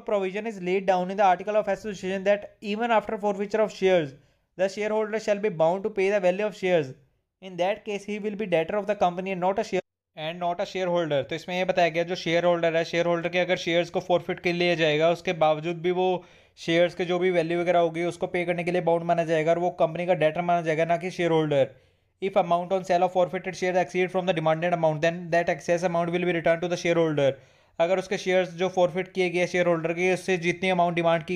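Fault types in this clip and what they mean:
Nothing stood out as a technical problem on listening.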